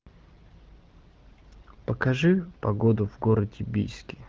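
Nothing goes wrong in this speech, which comes through a wideband AMR (HD Voice) link at 12.65 kbit/s with its usual ceiling of about 7.4 kHz.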